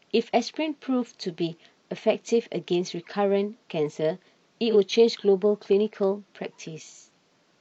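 At 4.70 to 4.76 s, AAC frame loss with concealment. About 43 ms of audio goes missing, which fits one lost frame. The decoder patches the gap from earlier spectrum, leaving a brief smeared, noisy blur in the speech.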